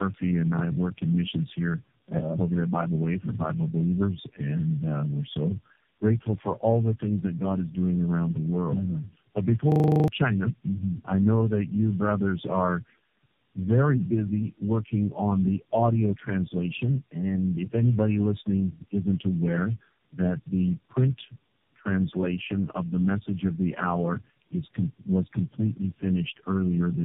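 Throughout, tandem speech coding: the speech passed through about four successive speech codecs, each re-coding degraded output, leaving it rough, warbly and muffled, with nothing above 3.7 kHz.

From 9.72 to 10.08 s, a system hang loop: the playback stalled while the hardware repeated one 40 ms buffer nine times, producing a 25 Hz buzz and dropping roughly 0.4 s of audio.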